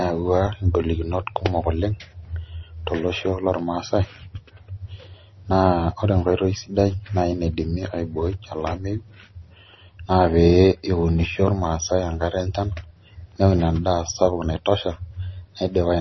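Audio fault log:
Throughout, MP3 compression: the speech has nothing above 5.9 kHz and carries heavy codec damage, likely from an MP3 encoder starved of bits, which fits a bitrate around 25 kbps. With so little data, the encoder drops the treble at a fixed cut-off and discards weaker frequency lines that come and go between frames. That leaves the speech dull and muffled at the top, with s sounds blunted and a watery, swirling texture over the rest.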